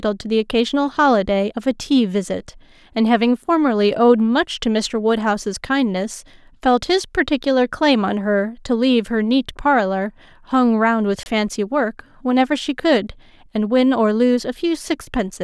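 At 11.23 s the program most likely failed to deliver a block of samples to the output in time, and that stretch of the speech was replaced with zeros, a block of digital silence lasting about 28 ms, until 11.26 s. Because the signal drops straight to nothing and returns with no fade, at this length the result is heard as a brief hole punched into the speech.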